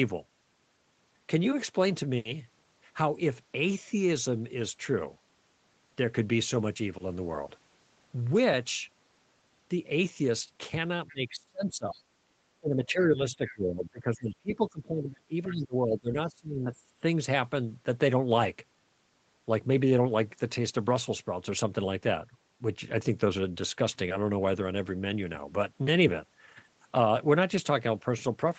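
Other side's voice leaking through appears at 11.08–11.13 s, about 25 dB below the speech, then at 13.34–13.55 s and 15.47–15.53 s, about 20 dB below. These are brief, faint scraps of a second voice, likely loudspeaker echo that the echo canceller failed to remove from the microphone.

Speech suppressed in double talk runs from 11.08 to 12.08 s, with the level dropping by up to about 30 dB. It returns from 12.6 to 16.72 s, with drops of up to about 25 dB across roughly three seconds of that span. The speech dips and breaks up in pieces, likely because the canceller could not separate the talker from the echo and turned both down.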